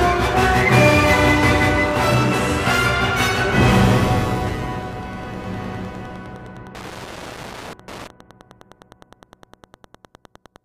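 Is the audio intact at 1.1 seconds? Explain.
No. Wi-Fi interference runs through the whole clip, including 1.1 seconds. A nearby radio's beacon, rectified by the audio circuit, ticks every 102.4 ms, around 25 dB below the signal. It shows as evenly spaced thin vertical lines on a spectrogram and as small regular spikes on the waveform.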